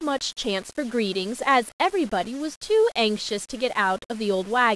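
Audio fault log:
Throughout: low bit depth without dither. The speech has a grainy, fizzy edge that tracks the voice, with quiet tails breaking into sputter or dropping out. It sounds like rounding to about 6 bits, likely with no dither, leaving the error roughly 25 dB below the signal.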